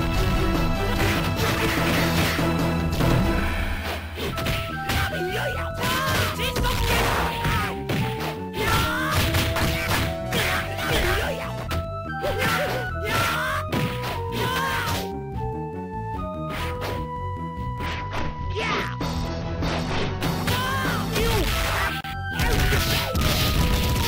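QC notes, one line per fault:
17.86 to 20.21 s, Bluetooth SBC bit pool drop: for about 2.4 s the top end goes dull and a gritty, grainy noise rides on the audio, then the treble returns. The encoder cut the bits it spends per frame to keep the link alive, so the highest sub-bands get little or nothing and the remaining ones are quantised coarsely. The depth of the loss fits a bit pool falling from around 28 to about 9, near 78 kbps.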